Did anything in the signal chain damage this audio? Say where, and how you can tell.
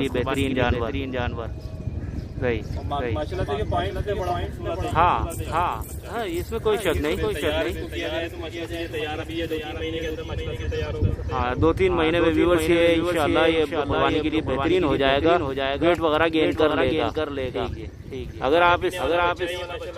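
Yes. The damage is a doubled audio track, most likely from the same signal being picked up a second time through a slower route, such as a monitoring or loopback path in the capture or playback chain, and mixed back in. Throughout the clip, every sound is followed about half a second later by a full-band replica, roughly 5 dB quieter. The repeat has no decay tail or room colouring, so it reads as a second, late copy rather than an echo.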